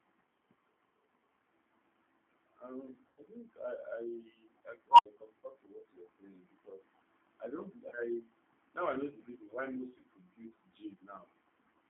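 The whole recording has gone through a G.729 codec. The line is squeezed to roughly 200 Hz to 3.7 kHz, and the speech has that slightly rough, synthetic edge you get when a voice is rebuilt from a vocal tract filter and a handful of pulses per frame. The damage is plainly audible and fits an 8 kbit/s G.729A link.

At 3.08 to 3.22 s, just before "think I", there's VoIP packet loss concealed by the speech codec. About 90 ms of audio went missing, which points to three lost packets. The decoder carried on from its last pitch and filter settings and faded the gain, so you hear a stretched tail that fades away. The speech stays a bit weak for a moment after the packets come back.

Then at 4.91 to 5.06 s an unstable filter kicks in. A recursive filter got bad coefficients, so a tone around 1 kHz swells over about 80 ms into a loud squeal and clips. The output then overflows and cuts to about 70 ms of silence until the filter resets.

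Shorter concealed losses follow. There's about 30 ms at 5.39 to 5.43 s. Another 30 ms hits at 7.89 to 7.96 s, right after "saying because I don't". Then there's about 60 ms at 9.98 to 10.06 s, after "the reason why most". Each one is a brief smear, and the voice recovers a little sluggishly afterwards, since each decoded frame builds on the previous one.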